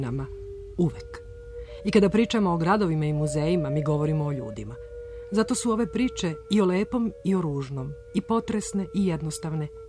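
Nothing in the audio stood out as a technical problem on listening.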